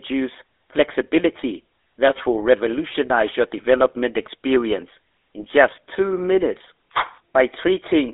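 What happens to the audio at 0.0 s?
GSM full-rate codec damage is present from 0.0 s and runs through the whole clip. The speech is rebuilt from a vocal-tract filter driven by a sparse, regularly spaced pulse train, so the voice comes out plainly buzzy and gravelly, which fits the 13 kbps full-rate coder. The line band sits at 300 Hz to 3.7 kHz, with nothing above 3.8 kHz, giving a thin, muffled telephone tone with no bass or upper treble.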